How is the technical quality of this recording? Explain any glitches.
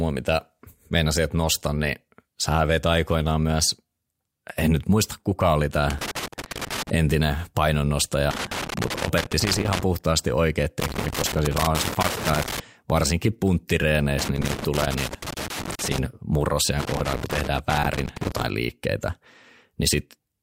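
The speech keeps getting hit by loose connector crackle, five bursts in all. The first runs from 5.9 to 6.9 s, right after "nyt muista kuka oli". The rest sit at 8.31–9.83 s (just after "entinen painonnostaja"), 10.8–12.6 s, 14.19–15.98 s and 16.79–18.44 s. Each one sounds like irregular scratchy crackling. It's a worn or dirty contact shifting and making and breaking, so the signal gets chopped up, with pops wherever there's DC on the line.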